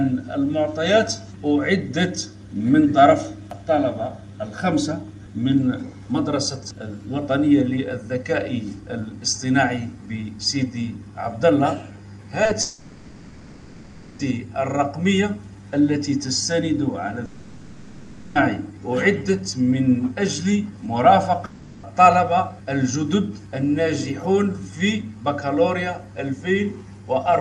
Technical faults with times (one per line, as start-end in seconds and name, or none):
12.43-12.51 short concealed packet loss
12.61-14.21 long network dropout
17.25-18.37 long network dropout
21.45-21.85 long network dropout